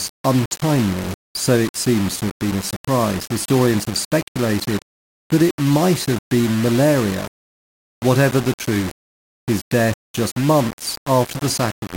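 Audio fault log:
Throughout: low bit depth without dither. The speech sounds coarse and grainy, with a gritty distortion that moves with every syllable and noise sitting only about 15 dB below the signal. The quietest moments sputter or drop to silence. This likely comes from rounding to 4 bits with no dither.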